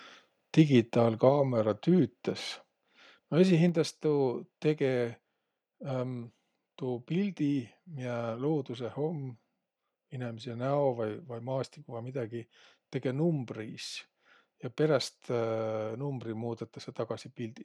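At 0.59 to 0.61 s the speech has a brief, harsh crackle on a loud peak. This is microphone overload. The input level was likely set too high, pushing peaks about 1 dB past the converter's limit. Their tops were flattened, affecting roughly 2 percent of samples.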